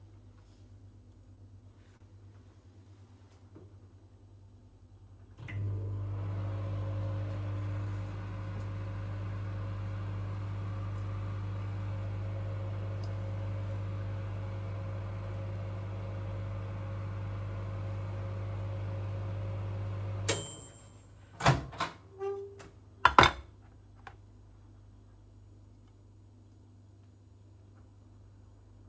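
Between 1.36 and 2.86 s there are scattered short gaps: about four lost or late packets, the longest around 40 ms, each patched by extending the preceding sound. The concealment fills only a small share of that stretch, so it comes through as brief ticks and smeared moments.

From 1.72 to 5.65 s a jitter buffer slow-down overlaps this. The receiver rebuilds its reserve by repeating single pitch periods, adding 165 ms in total. Playback runs at 96% speed with unchanged pitch, so sounds are drawn out. Both faults sit on a G.722 call path with nothing above 8 kHz.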